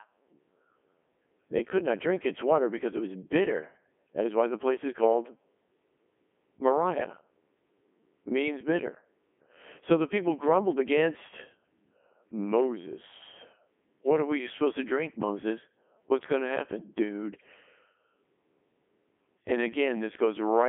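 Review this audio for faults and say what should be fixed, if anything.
The speech passed through a Codec 2 vocoder for the whole clip, with buzz consistent with its 3.2 kbit/s mode. Only pitch, voicing and spectral envelope survive, re-synthesised from sine waves within a 250 Hz to 3.5 kHz band, so it sounds heavily robotic and buzzy, with nothing above 3.7 kHz. Capture or route the source without this low-bitrate digital-radio link.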